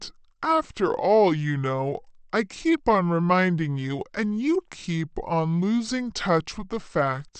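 This speech clip has a wrong sample rate throughout: it plays at 0.726 times its proper speed, about 5.5 semitones low, fitting 44.1 kHz audio played at 32 kHz. A spectrogram shows harmonics and formants compressed downward and every event stretched in time.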